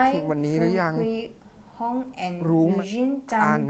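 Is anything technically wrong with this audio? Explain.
No, nothing stood out as technically wrong on listening to this speech.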